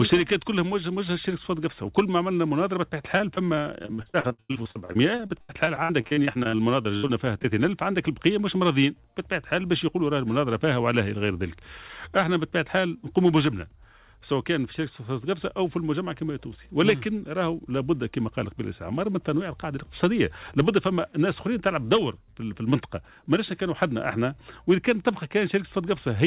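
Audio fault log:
3.18–7.46 s repeated packet loss (robotic sound): choppy, robotic sound with pieces missing, as 36 gaps up to 94 ms were patched by extending the previous sound.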